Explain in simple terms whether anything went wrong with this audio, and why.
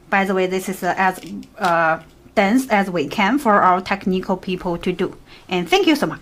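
Nothing went wrong here: there is no technical problem anywhere in the recording.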